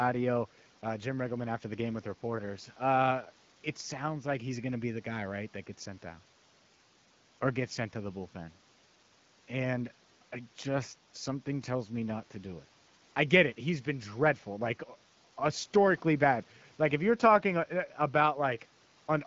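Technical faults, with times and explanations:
No technical faults are audible.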